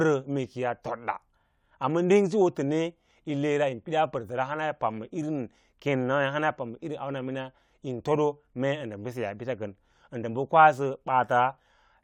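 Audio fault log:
Nothing stood out on listening to the speech in this recording.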